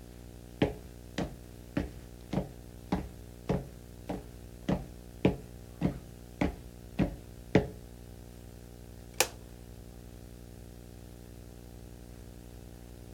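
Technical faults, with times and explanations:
Throughout, video or display buzz: a steady 60 Hz buzz with gritty hash on top, sitting only around 10 dB below the sound itself. A screen or video cable is leaking into the audio path, and the buzz follows the picture's field rate.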